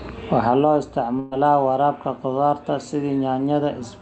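At 1.19 s there's a burst of packet loss lasting to about 1.33 s, roughly 120 ms of speech that never arrived in time. Rather than dropping to silence, the receiver stretches out the last bit of sound it had and fades it down, so you get a brief held buzz or fading hiss where the speech should be. When it picks up again, about 120 ms of the talk is just gone. The Opus-style coding around it tops out near 8 kHz.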